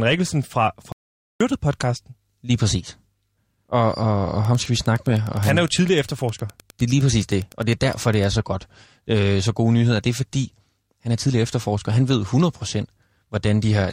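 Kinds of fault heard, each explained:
Playback stall: The speech stops dead at 0.92 s and the output stays silent for about 480 ms, until 1.41 s, when it picks up again. The likely cause is the player running out of data or having its thread blocked. A dropout or packet loss gaps for only a few milliseconds, or fills the gap with smeared sound. This is a clean, clearly audible halt of nearly half a second.
Wi-Fi interference: From 4.39 s to 8.28 s, just before "så godt", a steady ticking runs underneath the speech, about 25 dB below it. The ticks repeat every 102.4 ms, which fits a nearby Wi-Fi radio's beacon being rectified by the audio circuit. Mains hum is a continuous tone at 50 or 60 Hz and its harmonics. This is instead a train of separate clicks, close to ten per second, keeping strict time regardless of what is being said.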